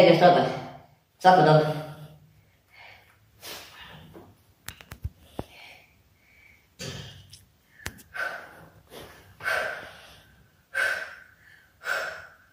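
The audio has a wrong sample rate throughout. It runs about 1.38 times fast and sounds 5.55 semitones high, which fits 32 kHz material played at 44.1 kHz.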